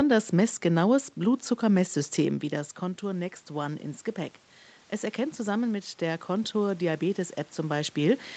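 From 5.16 s to 8.31 s there is automatic gain rising: the input level falls by about 10 dB, and the gain control responds by lifting its gain by about 4 dB over roughly three seconds. What separates it from a talker simply moving, as happens around 2 s and again near 8 s, is that the room noise swells along with the speech, because the whole signal is being amplified rather than only the voice arriving louder.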